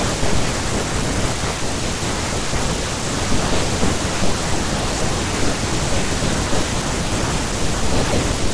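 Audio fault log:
Nothing to log here, since there's no technical fault anywhere in this speech recording.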